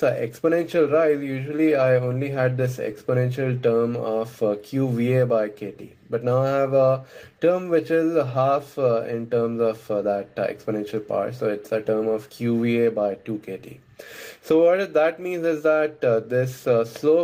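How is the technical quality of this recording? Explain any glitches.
Listening through the recording, nothing stood out as a glitch or technical problem.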